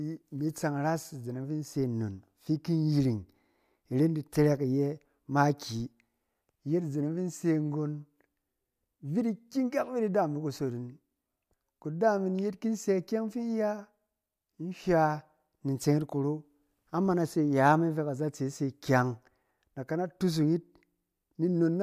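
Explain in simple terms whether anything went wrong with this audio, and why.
Nothing went wrong here: the speech carries on smoothly the whole way, with no glitches, dropouts or odd noises to be heard anywhere along the way.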